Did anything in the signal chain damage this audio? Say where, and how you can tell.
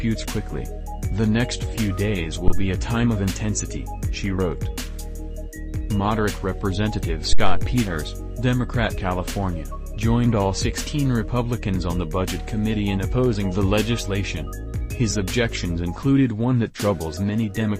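Yes. At the analogue input, phantom power was switched on or off on a live channel, causing a phantom power thump at 2.48–2.75 s and 7.33–7.71 s. The supply step through the coupling capacitors gives a deep thump peaking near about -5 dBFS, decaying in 60 and 87 ms.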